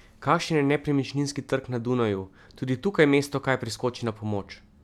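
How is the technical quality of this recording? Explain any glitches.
The technical quality of this recording is good, and there are no glitches to explain.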